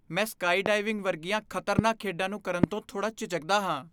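Three single loud pops cut across the speech, at 0.66–0.68 s, at 1.79–1.81 s just before "ਖੇਡਾਂ ਨੂੰ ਕਰਨ ਤੋਂ", and at 2.64–2.66 s right after "ਖੇਡਾਂ ਨੂੰ ਕਰਨ". Each is a sharp thump roughly 20 dB above the speech, which carries on underneath. The likely cause is a brief voltage step from a plug, switch, static or driver glitch. On the waveform each is a tall spike, and on a spectrogram a thin vertical stripe spanning all frequencies.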